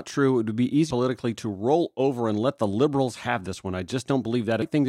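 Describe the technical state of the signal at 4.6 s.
A short glitch cuts into the speech at 4.62 s, the mark of damaged data in a compressed stream: a corrupted stretch of the encoded file made the decoder misread those frames and lose sync before locking onto the next valid frame header.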